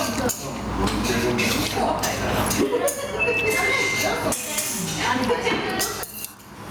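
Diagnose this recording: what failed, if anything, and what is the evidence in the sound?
The level keeps swinging, the whole way through, a swing of around 20 dB, with loud and soft parts squashed closer together. That's gain pumping, likely from input gain set far too high with a fast limiter or compressor in the processing clamping down on every peak.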